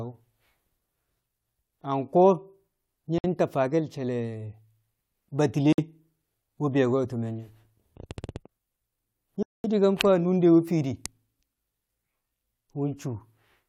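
Speech with three dropouts to silence, at 3.18 to 3.24 s (58 ms), 5.73 to 5.78 s (56 ms) and 9.43 to 9.64 s (214 ms), each resuming abruptly. These are likely Bluetooth stalls, where delayed packets let the headphone buffer run empty until retransmissions arrived.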